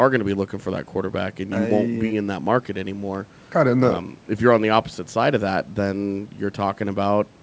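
No faults: the speech's band stops at 8 kHz, consistent with normal call microphone processing and a G.722 wideband call path.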